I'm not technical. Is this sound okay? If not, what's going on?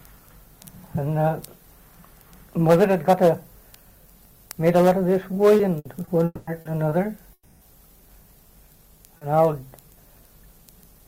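No, it isn't. Around the middle of the clip the sound breaks up several times.

At 5.57, 6.05, 6.61, 6.89 and 9.17 seconds you hear a quick smear or wobble, each lasting only 20 to 40 milliseconds. This is short concealed packet loss. Audio travels over the network in small chunks, and a few of them arrived too late. The receiving end covered each hole by briefly extending the sound just before it, so the gap is blurred over rather than heard as a clean cut.

From 5.79 to 5.87 seconds the sound briefly sticks as a held buzz or fading hiss, then jumps ahead. This is a burst of packet loss. Several chunks in a row went missing, about 60 milliseconds' worth. The receiver stretched the last sound across the gap and let it fade, and when real audio returned, that stretch of the original sound was gone.

The longest breaks run from 6.25 to 6.49 seconds and from 7.33 to 7.63 seconds. Each one starts as a held, fading buzz or hiss, drops briefly to near-silence, and then the sound resumes further along. 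The likely cause is a long network dropout, where nothing got through for about a quarter to a third of a second. The stand-in sound could only cover part of each gap, so a piece of the original is missing each time.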